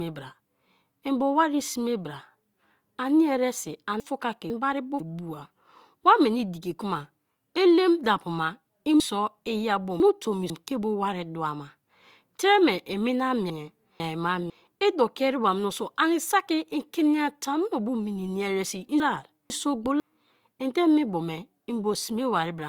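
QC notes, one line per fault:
4.0–5.0 s, 9.0–10.5 s, 13.5–14.5 s, 19.0–20.0 s, chunks out of order: half-second pieces play late, jumbling the sound at the hard joins. One chunk late after "ani eresi", at 13.5 s and after "mini ya eresi i", two after "elem dapu ma i".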